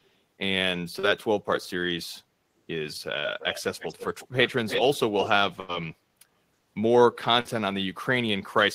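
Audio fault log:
0.05–0.09 s, and 3.39–3.61, 3.79–4.28 and 4.68–4.98 s, echo leak: A delayed copy of the speech returns, likely because the far end's echo canceller let loudspeaker sound leak back from its microphone. The first scrap, 393 ms late, is very faint, about 40 dB down. The later run trails by 321 ms and grows from about 15 dB down to only about 5 dB below the speech. On a spectrogram, duplicate harmonic patterns appear shifted right; the waveform shows overlapping, smeared envelopes.
0.99–1.06 s and 7.41–7.48 s, short concealed packet loss: About 40 ms of audio failed to arrive each time. The receiver bridged the hole with roughly 37 ms and 41 ms of extrapolated sound, continuing the previous pitch or noise before blending back, so each sounds like a brief smear or wobble. On a spectrogram, harmonics briefly flatten into a steady, slightly blurred patch. The waveform shows a short stretch of oddly regular cycles.
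3.19–3.27 s and 5.60–5.72 s, burst of packet loss: Consecutive packets were lost, 40 ms and then 80 ms of audio. The receiver held and faded the last sound for about 51 ms and 83 ms before the speech resumed further along, so a held buzz or fading hiss replaces the missing stretch. On a spectrogram, frozen horizontal harmonic bands fade out and then cut abruptly into new material. The waveform shows a decaying, repetitive segment followed by a jump.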